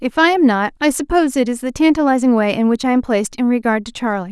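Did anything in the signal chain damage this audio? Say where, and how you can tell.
No, nothing in the signal chain damaged this audio.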